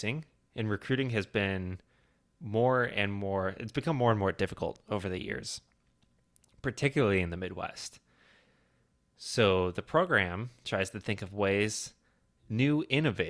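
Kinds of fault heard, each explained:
Nothing stood out as a technical fault on listening to this speech recording.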